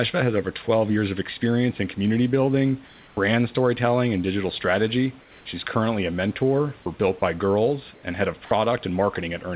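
From 0.77 s to the end, faint single ticks recur about once a second, most audible where the speech is loud and sustained and absent in the pauses. These are clock slip clicks. The likely cause is two devices running on free clocks that differ by something like 20 ppm, so one sample is dropped or repeated each time the error adds up to a whole sample.

At 2.87 to 3.17 s, 5.21 to 5.45 s and 7.94 to 8.03 s, the textured room background in the pauses turns into a smooth, characterless hiss, about 2 dB quieter in the first gap, about 3 dB quieter in the second and about 1 dB louder in the third. This is comfort noise in place of the background. The sender likely switched to discontinuous transmission when it heard no speech, and the receiver filled each gap with synthetic noise shaped only roughly like the real room.

At 8.45 to 8.51 s, about 50 ms of actual speech vanishes and the same flat hiss sits where it should be, then the speech returns. 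This is sound dropped by the voice detector. The detector likely misread that quiet stretch as background and stopped sending, so the receiver played 60 ms of comfort noise instead. The audio has nothing above 4 kHz throughout, which fits the G.711 call codec it passed through.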